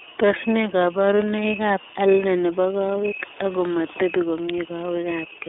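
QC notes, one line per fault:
Throughout, iLBC codec: the speech has a plainly audible coded roughness, slightly buzzy and synthetic. Nothing comes through above about 3.7 kHz, and the lows thin out below roughly 300 Hz, so it sounds like a narrow phone line. iLBC codes each 30 ms frame on its own, without leaning on the previous one, so the excitation gets a bit grainy from frame to frame. That roughness and the 30 ms framing fit the 13.33 kbps mode.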